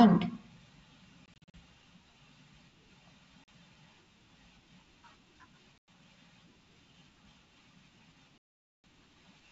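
Packet loss on an ADPCM call cuts hard-edged silences at 1.26–1.54 s, 3.44–3.48 s, 5.78–5.88 s and 8.38–8.84 s. The first is scattered short gaps. After each gap, the decoder's predictor and step size lag the sender's. Speech resumes slightly distorted.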